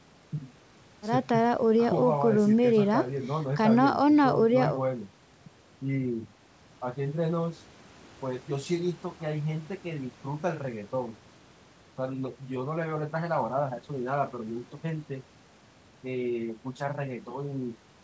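No technical faults can be heard anywhere in this speech recording. Nothing reaches above 8 kHz, which is what a wideband call codec on the WebRTC call path and the call microphone processing normally leave, so that ceiling is expected rather than a problem.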